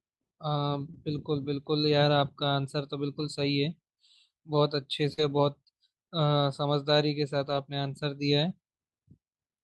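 At 0.91 to 0.95 s a short concealed packet loss occurs. About 20 ms of the signal never reached the decoder in time, and the receiver filled the hole by extending the preceding sound before blending back into the real audio. Overlapping it, from 0.93 to 0.95 s, a lost packet rebuilt from error correction follows: the next packet carried a low-bitrate copy of the missing one, so the decoder played that instead of leaving a gap. The result is a brief smear followed by a rougher, noisier fragment.

The same pairing returns at 5.13 to 5.19 s, where 40 ms is concealed by continuation, heard as a short wobble in which a brief sound can blur away. From 5.17 to 5.23 s, 40 ms is rebuilt from in-band forward error correction, which fits two lost packets, and that stretch sounds grainier than the audio around it.

From 7.45 to 7.59 s, another lost packet rebuilt from error correction spreads about 80 ms of rebuilt audio across the span, which points to several separate lost packets each recovered from the copy in the packet that followed. 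There is no dropout, but the passage has a rough, noisy texture compared with the surrounding audio.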